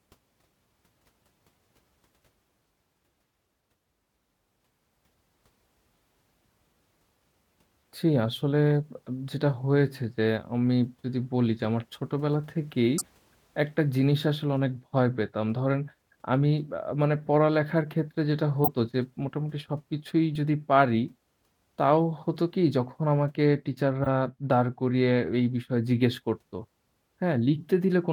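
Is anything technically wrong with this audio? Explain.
Yes. Corrupt frame decoded at 11.64 s, 12.97–13.02 s, 18.64–18.68 s, 20.35 s, 24.03–24.07 s and 27.59–27.64 s: damaged compressed frames were played anyway, scattering energy into wrong frequencies as brief chirps and noise bursts. Each hit spans a couple of frames, or a few at 24.03 s. The loudest reaches about −10 dBFS at 18.64 s, and the 12.97 s burst also drops about 20 ms of audio.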